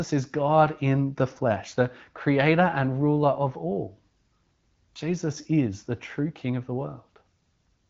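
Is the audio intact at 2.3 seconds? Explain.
Yes, at 2.3 seconds the audio is intact, with the speech passing through the AMR wideband (HD Voice) codec at 15.85 kbit/s as normal.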